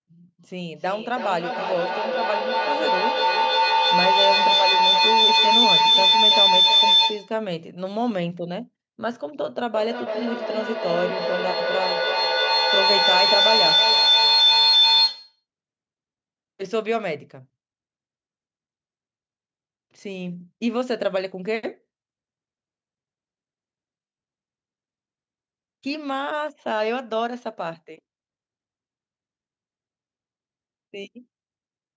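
From 0.71 to 7.43 s and again from 9.75 to 15.44 s, a feedback howl builds near 4 kHz: sound loops between two devices' microphones and loudspeakers, gaining each trip, repeating roughly every third of a second and peaking about 8 dB, then about 7 dB, above the speech. On a spectrogram it shows as a bright horizontal line.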